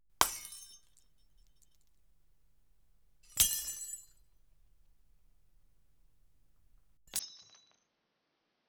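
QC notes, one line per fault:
7.19–8.68 s, input switched to a poorer device: from 7.19 s to the end, the sound abruptly loses everything above 6.4 kHz, drops about 5 dB, and gains a faint new background noise about 35 dB down, likely from a poorer input. The arrival of that separate noise floor marks a device change rather than a simple filter.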